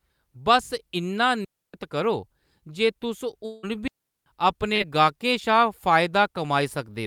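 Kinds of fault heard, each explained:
Digital wireless dropout: the wireless link lost too much data and the receiver muted with a very fast fade, leaving clean holes of near silence with no noise burst around them, about 0.29 s long at 1.45 s and about 0.39 s long at 3.88 s.
Long network dropout: at 3.45 s the audio stops arriving and the last sound is stretched into a fading buzz or hiss lasting about 0.18 s, then the speech resumes further on with roughly 0.18 s missing; a network interruption is the likely cause.
Burst of packet loss: at 4.75 s a short run of lost or late data leaves a gap that the receiver fills by holding and fading the last sound for about 47 ms, after which speech resumes with about 40 ms skipped.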